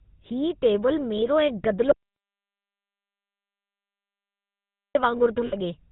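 The speech passes through the GSM full-rate codec throughout. It keeps nothing above 4 kHz and leaves a buzzy, gravelly roughness. At 1.16 to 1.19 s, lost GSM frames are heard as a brief metallic ring. The decoder repeats the last good frame, which fits one 20 ms frame. From 1.92 to 4.95 s, an audio dropout to silence removes about 3 seconds of sound. The gap is silent with no room tone. A lost input or link is the likely cause. At 5.46 to 5.56 s, lost GSM frames return as a longer rough, ringing smear. That 60 ms span points to three missing frames.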